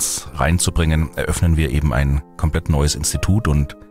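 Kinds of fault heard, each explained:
No kinds of fault are heard in this audio.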